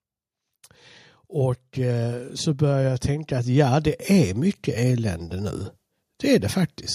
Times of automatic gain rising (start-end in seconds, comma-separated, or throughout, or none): 1.33-5.66